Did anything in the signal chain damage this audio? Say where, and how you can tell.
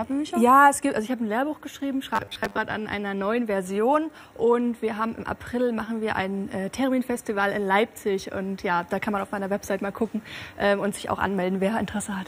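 Yes. From 2.16 to 2.58 s the sound collapses into a robotic sound from repeated short buffers: a rigid, metallic buzz fixed at 100 Hz that only loosely tracks the original. The likely stage is the driver or buffer. Audio arrived too seldom, so a 10 ms chunk was looped to fill the gap, replacing most of the real signal. Unlike codec warble or packet-loss dropouts, the steady 100 Hz pitch reveals a constant repeat length.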